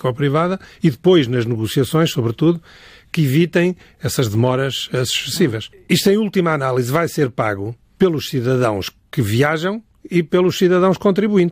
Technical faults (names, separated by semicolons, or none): none